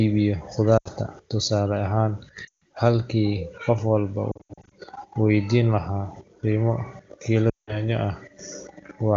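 Lost AMR speech frames hit at 0.78–0.88 s, 2.47–2.59 s, 4.31–4.74 s and 7.50–7.83 s. Failed frames made the decoder repeat the last good pitch and vocal tract settings at falling gain, so the speech drops to near silence within two frames, and the voice comes back weak or rough for a moment. The 4.31 s stretch is scattered warbles, runs no longer than 80 ms. Around them the speech stays clear, fitting a high AMR-WB rate.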